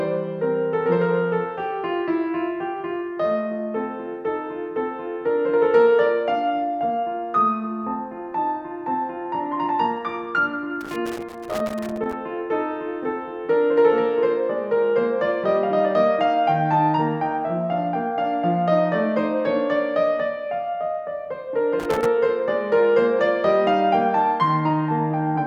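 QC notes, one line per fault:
10.81–12.13 s and 21.79–22.06 s, loose connector crackle: a worn contact in the music's signal path makes and breaks as it moves, chopping the audio into irregular bursts of scratchy crackle.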